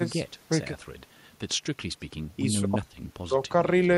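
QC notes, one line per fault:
No faults found: the speech signal keeps unbroken continuity across the whole recording.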